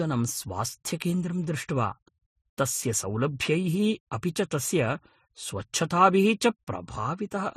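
Speech clip with transcoding between lossy codecs throughout. Nothing is heard above 15 kHz. Two sets of coding artefacts stack, likely from low-bitrate Vorbis re-encoded as MP3.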